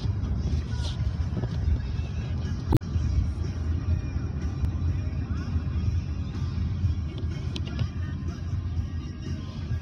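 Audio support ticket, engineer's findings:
Damaged data in a compressed stream, 2.71–2.82 s: audible glitch, decoder resync after corrupt frames. Spectrogram: broadband smear; waveform: abrupt discontinuity, timing shift of about 19 ms.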